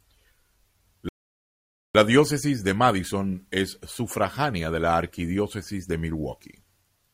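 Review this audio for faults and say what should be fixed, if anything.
At 1.09 s the speech drops abruptly to silence and picks up again at 1.95 s exactly where it left off, with nothing missing. This is a rebuffering stall: playback exhausted its downloaded audio and waited for more, adding about 0.86 s. A larger playback buffer or adaptive bitrate switching would prevent it.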